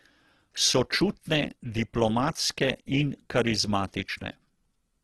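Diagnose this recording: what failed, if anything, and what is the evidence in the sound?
The codec stage failed throughout. Rough, grainy speech and a spectrogram cut off above 12.1 kHz with noise-filled bands fit likely Opus compression near 12 kbps, with starved bands filled by noise.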